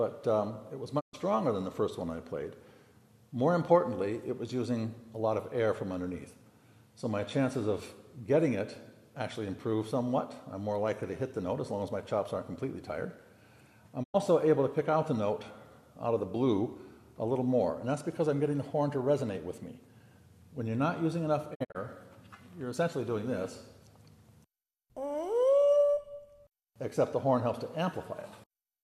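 At 0.99 to 1.15 s, 14.02 to 14.16 s and 21.53 to 21.77 s the audio shows digital broadcast dropout: the receiver lost valid frames and muted until good ones returned. Each hole fades out and back in over about 20 ms, and the sound skips ahead, so the missing material is simply gone. The third dropout is broken into several short gaps of up to 48 ms. Its clean fades to silence, with no repeated or smeared sound, set it apart from packet-loss concealment.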